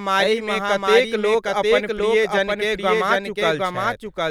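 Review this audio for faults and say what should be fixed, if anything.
The whole clip carries a doubled audio track: a second, full-band copy of the speech trails the original by roughly 0.7 s at about the same level, with no decay or room colour, so everything sounds like a hard echo. It's likely a second capture path or an edit stacking two out-of-step copies. Make sure only one source feeds the mix and check edits for duplicated layers.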